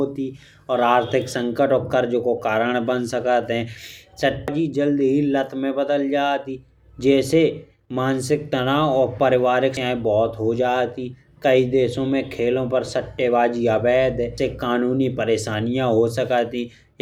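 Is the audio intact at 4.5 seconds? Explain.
No. At 4.48 s the speech is hit by damaged data in a compressed stream. Corrupted bytes make the decoder misread the frame and resync at the next header, giving a brief chirp or blip. A spectrogram shows a thin broadband smear, and the waveform shows a sudden discontinuity.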